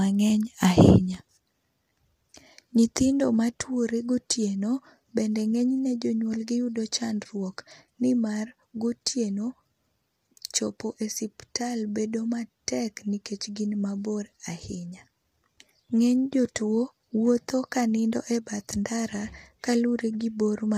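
A speech recording that carries plainly audible low-delay AAC compression from start to finish: the voice sounds rough and grainy, with a hiss-like fill between the harmonics and a dulled, somewhat synthetic top end. The likely cause is AAC-ELD, whose short frames smear pitch detail, at a rate that fits roughly 32 kbps. On a spectrogram the harmonic stripes look blurred and noisy between bands, and the upper region appears patchy or copied rather than finely detailed.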